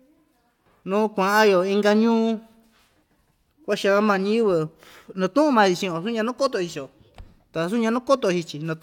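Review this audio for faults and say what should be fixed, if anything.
Nothing stands out as a fault anywhere in the recording, so there's nothing here that needs fixing.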